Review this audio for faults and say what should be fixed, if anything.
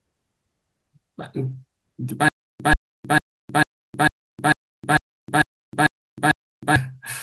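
At 1.51 s, 2.71 s and 4.91 to 4.97 s, the audio briefly turns rougher and noisier without any gap: a lost packet rebuilt from error correction. Each lost packet, two at 4.91 s, was replaced by a low-bitrate copy carried in the next packet, giving 20, 20 and 40 ms of coarse audio. Unlike concealment or a dropout, nothing goes silent or smeared, only degraded. To prevent it, reduce packet loss on the network path so the decoder rarely needs the backup copies.

From 2.29 to 6.76 s there is a stutter with silent gaps: a 135 ms burst repeats 10 times every 448 ms, each followed by about 313 ms of digital silence. The player likely stalled, replayed its last fragment on each retry, then ran empty, and the audio meant for that span is lost. The dead-silent gaps and steady rhythm distinguish it from a seamless loop or jitter. To prevent it, give the stream enough buffering and fix the stall so playback never replays stale fragments.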